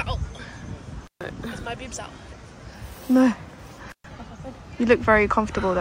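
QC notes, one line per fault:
1.04 to 1.23 s and 3.90 to 4.06 s, intermittent contact. The sound drops out twice, for about 139 ms and then about 123 ms. Each gap opens and closes with a short crackle. Faint hiss remains while the sound is gone. A loose plug or cable connection is briefly breaking the signal path. The scraping metal contacts cause the crackle at each edge. The hiss is what the open line picks up while it is disconnected.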